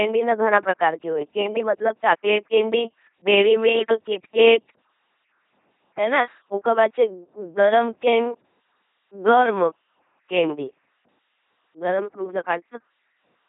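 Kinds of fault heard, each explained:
LPC-10 vocoder: heavy 2.4 kbit/s coding rebuilds the speech as buzzy robotic pulses or hiss; spectrograms show rigid harmonic combs, noise bands, nothing above 3.8 kHz.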